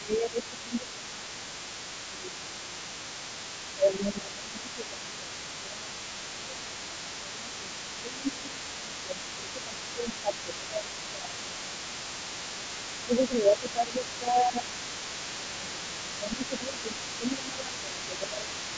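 The echo canceller appears to have failed to remove the far end's loudspeaker playback from the microphone, so the other side's voice is leaking through from 0.0 s to the end of the clip. That second voice sits about 15 dB below the main talker. This is most likely residual echo left by incomplete cancellation.

Speech suppressed in double talk occurs in five stretches: 0.0–1.51 s, 2.09–2.98 s, 3.75–11.92 s, 13.05–14.72 s and 15.37 s to the end. With both sides talking at once, the canceller could not separate the near talker from the echo and pulled the whole signal down. The talker's voice dips by as much as about 15 dB. The longest run, from 3.75 s to 11.92 s, covers roughly seven seconds. That pattern is the likely result of over-suppression during double talk.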